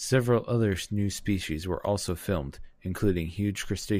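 Nothing in the speech stood out as a technical problem on listening.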